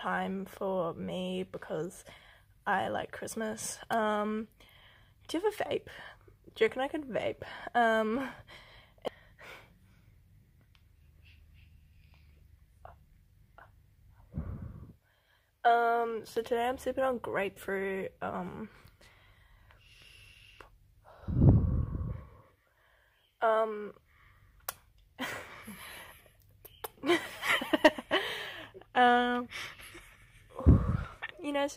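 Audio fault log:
21.44–21.49 s, hard clipping: the peaks push about 1 dB past what the chain can pass, so their tops get sliced flat. That's just a brief crackle on the loudest moment.
27.85–27.87 s, hard clipping: the overload here is about 7 dB, so much more of the waveform gets squared off and the flat tops throw harmonics way up the spectrum. It's a short, harsh burst of fuzz.
30.69–30.72 s, hard clipping: another mild one, about 1 dB over, heard as a small tick of crackle on the peak.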